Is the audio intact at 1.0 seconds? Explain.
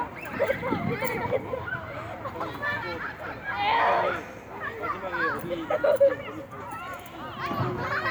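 Yes, the audio is intact at 1.0 s, with no dropout, click, distortion or other fault at that moment.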